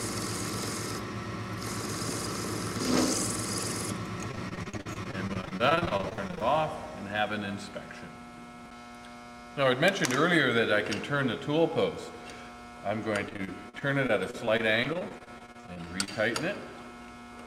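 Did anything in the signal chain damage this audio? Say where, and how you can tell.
Yes, the network stage repeatedly lost or delayed packets, causing repeated packet loss (robotic sound), from 4.31 to 6.43 s and from 13.29 to 16.09 s. The receiver patched 30 and then 24 gaps, each up to about 44 ms, by extending preceding audio. About 31% and 17% of those spans became choppy, robotic filler.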